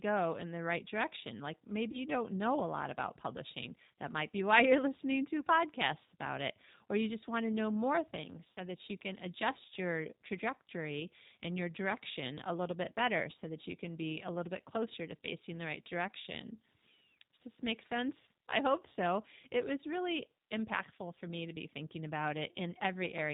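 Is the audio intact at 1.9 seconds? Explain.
No. VoIP packet loss concealed by the speech codec affects 1.92 to 1.97 s, just before "you don't know a". About 20 ms of audio went missing. The decoder filled the gap by extending its last pitch and vocal tract filter at falling gain, which stretches the sound into a fading buzzy tone or coloured noise. Because each frame builds on the one before, the speech stays weak or distorted a little past the gap.

The G.729 codec also runs through this moment at 8 kbit/s. It rebuilds speech from a filter, a pitch predictor and a few pulses, and passes nothing above 4 kHz, so the speech has a plainly audible rough, synthetic quality.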